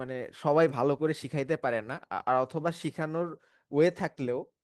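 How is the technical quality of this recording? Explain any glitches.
The technical quality of this recording holds up, with no glitches to explain.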